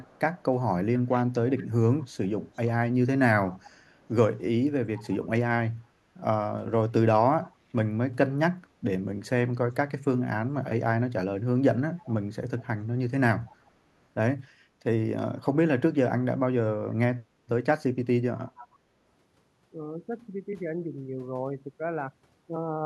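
Echo leak runs from 0.0 to 4.1 s. A faint copy of the speech returns about 0.47 s late, roughly 25 dB below it. This is likely loudspeaker pickup that slipped past an echo canceller and was sent back. Speech suppressed in double talk follows at 8.25 to 9.01 s. The speech dips in brief pieces, by up to about 10 dB, adding up to well under a tenth of a second. This likely happened because overlapping talk was mistaken for echo and turned down. The echo leak returns from 11.97 to 13.71 s, with the same delay and level. Inside it, at 13.41 to 13.45 s, another double-talk dip of about 10 dB briefly cuts the speech. Short echo scraps follow at 15.93 to 15.97 s, about 35 dB down, and at 18.57 to 18.68 s, about 20 dB down.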